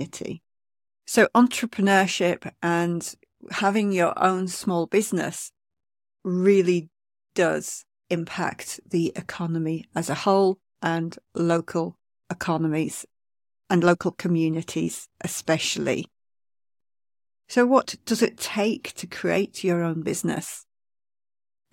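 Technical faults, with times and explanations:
No technical faults, with times and explanations, are present in this clip.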